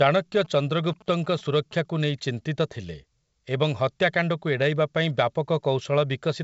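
From 0.45 s to 1.73 s, a galloping dit-dit-dit of short buzzes at about 217 Hz sits well beneath the speech. These are GSM signalling bursts: a nearby 2G phone sends short groups of radio bursts, and the audio circuitry rectifies them into audible pulses.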